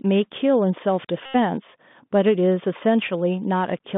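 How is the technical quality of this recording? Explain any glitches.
Technical quality is poor: the speech comes through a narrowband Bluetooth headset link with audible codec damage throughout, and there is one dropout-style glitch.

The Bluetooth CVSD headset codec affects the whole clip. The sound points to a 64 kbps CVSD stream, which codes each sample as a single up-or-down bit with an adaptive step. The band runs only from about 150 Hz to 3.6 kHz, so the speech sounds thin and muffled. Loud, sharp sounds outpace the step, so sibilants turn scratchy over a grainy hiss. On a spectrogram, energy stops abruptly near 3.6 kHz above a noise floor.

A Bluetooth headset packet repeat runs from 1.26 to 1.35 s. Voice packets were lost for about 86 ms, which fits roughly two dozen 3.75 ms packets, and the decoder kept replaying the last good one. Those identical repeats make a steady buzz near 267 Hz until clean audio resumes. 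In the waveform the same short segment tiles periodically. On a spectrogram it appears as evenly spaced horizontal harmonic lines.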